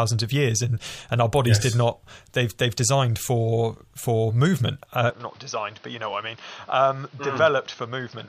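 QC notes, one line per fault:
5.10–8.28 s, input switched to a poorer device. Right after "for for movement uh", the speech turns duller and more boxed-in, with no gap at the change. Nothing is heard above 6.3 kHz from there on, so the top end is cut away. The level drops by about 5 dB. New background noise appears, around 30 dB below the speech. The likely cause is a switch to a lower-quality microphone or headset path partway through.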